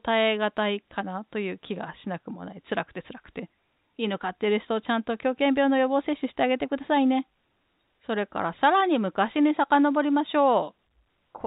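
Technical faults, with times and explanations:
No technical faults are present in the speech. The G.711 telephone coding holds everything below 4 kHz, with only a faint, level-following quantisation hiss well beneath the signal.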